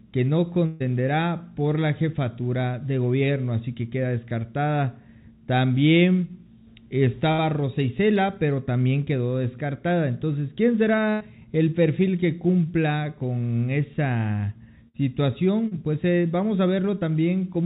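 A burst of packet loss at 0.66 to 0.82 s removes about 140 ms: the receiver extends the last sound and fades it, giving a held buzz or fading hiss, then resumes later with that stretch gone. The same happens at 7.32 to 7.40 s (60 ms missing).

From 7.80 to 8.51 s come CD scratch ticks: five ticks, about seven per second, each no longer than about a millisecond. A disc blemish defeats error correction once per revolution, and the player interpolates or mutes the damaged samples.

Further packet-loss bursts occur at 11.10 to 11.22 s (100 ms missing) and 14.88 to 14.96 s (60 ms).

Short concealed packet loss follows at 15.68 to 15.73 s (40 ms) and 16.99 to 17.03 s (20 ms). The gaps are filled by continuing the preceding sound and blending back, heard as a brief smear or wobble. The call path is band-limited, with nothing above 4 kHz, consistent with G.711 mu-law at 64 kbps.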